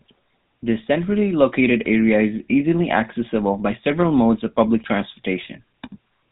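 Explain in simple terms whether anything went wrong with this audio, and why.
From the first second to the last, the speech sounds buzzy and gravelly, with a muffled, phone-like dullness and a clearly audible roughness. That is the sound of the GSM full-rate codec, the original mobile-phone voice coder. It rebuilds the voice from a simple model of the throat and mouth driven by a coarse train of pulses, which adds the rasp, and it passes nothing above 4 kHz, which removes the crisp top end.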